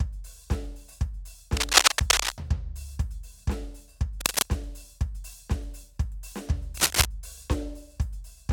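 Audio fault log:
1.55–2.32 s, 4.20–4.45 s and 6.77–7.05 s, cable scratch noise: dense, ragged bursts of scratching rustle sit over the music, about 10 dB above it in the first and about 5 dB in the two shorter ones. This is likely a worn lead or connector being moved, its contact resistance jumping rapidly. Unlike steady record crackle or isolated clicks, the noise comes in irregular clusters and stops completely between bursts.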